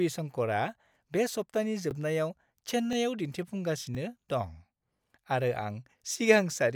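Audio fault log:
0.89–0.91, 1.91–1.93, 2.93–2.95, 3.95–3.97, 4.97–4.99 and 5.99–6.01 s, overlapping chunks: the speech arrives in one-second blocks, and each block begins 20 ms before the previous one finished, so that 20 ms slice plays twice. Each join sounds like a tiny stutter or click. Unlike a dropout, no sound is missing; the same fragment is repeated. Unlike random clicks, the glitches fall at a steady interval of about one second.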